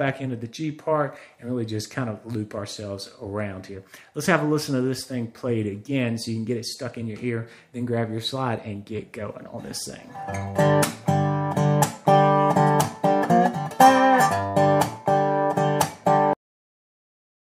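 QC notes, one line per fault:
16.33–17.58 s, cut-off end: the sound stops abruptly mid-event at 16.33 s and drops straight to digital silence with no decay or tail. The final stretch of audio was never written out, so playback simply runs out of material.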